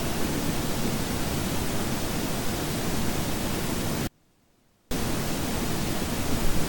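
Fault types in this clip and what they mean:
Audio dropout to a faint residue: from 4.07 s to 4.91 s the sound cuts out abruptly, leaving only a faint leak roughly 35 dB below its normal level, then returns just as suddenly about 0.84 s later. The likely cause is a brief loss of the signal while the path after the break stayed live. A waveform shows the envelope collapsing to a thin band with sheer edges, and a spectrogram shows a sharply bounded, near-empty vertical strip rather than a fade.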